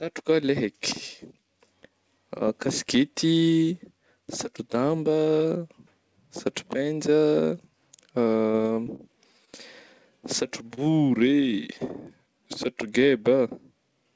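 Speech carried over a call link whose spectrogram shows a hard ceiling at 8 kHz, which fits a wideband codec such as G.722 at 64 kbps. From 8.52 to 9.01 s there is repeated packet loss with a robotic sound: the audio turns choppy and robotic as roughly five short holes, none longer than 30 ms, are patched by extending the preceding sound, leaving about a fifth of that stretch synthetic. On a spectrogram the harmonic stripes there freeze into short, copied blocks with brief dropouts between them, and the waveform shows repeated, near-identical cycles. Two isolated instances of short concealed packet loss follow, at 9.45 s and 10.75 s, each about 20 ms of missing audio filled by continuing the last pitch or noise before blending back. Each is heard as a tiny smear or wobble, and a short consonant could vanish. Each appears as a brief, slightly blurred patch in the spectrogram and a small run of repeated waveform periods.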